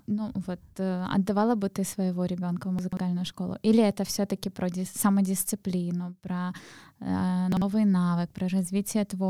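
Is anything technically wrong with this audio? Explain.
Yes, there are two instances of chunks out of order. At 2.79 to 2.97 s, one block of about 46 ms was delivered late and plays three blocks after its proper place. At 7.52 to 7.62 s, a block of the same size plays one position late. Nothing is dropped, but each reordered stretch has three hard joins, and the speech there sounds briefly scrambled and jumbled.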